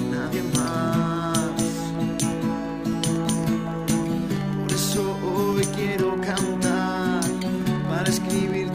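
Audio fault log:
throughout, filter restarted on every block: the filter loses its state at each block edge, so a small transient repeats as a 21.5 Hz buzz, fitting 2048-sample blocks.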